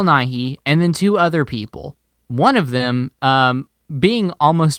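At 2.77 s there is a short concealed packet loss. Audio never arrived in time, so the receiver extended the preceding sound for about 24 ms, continuing its pitch or shaped noise, before blending back. It is heard as a brief smear or wobble rather than silence.

Straight after, from 2.80 to 2.82 s, one lost packet was rebuilt from error correction. The decoder played the low-bitrate copy carried in the next packet, so this 20 ms has no gap. Unlike the concealed patch, which guesses by extrapolating, the real sound is there, only rougher and noisier.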